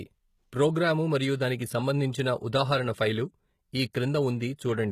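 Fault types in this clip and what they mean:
HE-AAC compression: The speech sounds likely coded with HE-AAC at a low bitrate, roughly 20 kbps. Codec damage is plainly audible. Nothing survives above 14.9 kHz. The treble is rebuilt from copied lower bands, so s sounds come out gritty and metallic.
Pre-echo: At 3.93 s a brief hiss leads into a sharp attack. It spreads about 13 ms ahead of the onset. Coding noise meant for the loud attack leaks into the quiet moment before it, softening and smearing the attack.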